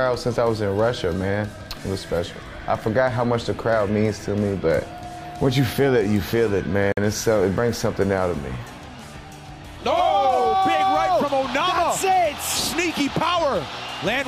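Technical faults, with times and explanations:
6.92 to 6.97 s, gap between stream segments: the sound drops out cleanly for about 50 ms and then carries on as if nothing happened. The edges are abrupt, with no fade, because the timestamps of two neighbouring segments don't quite meet and the player pads the hole with digital silence. Nothing is actually missing from the material. It's just pushed about 50 ms later, so everything after the gap runs that much behind.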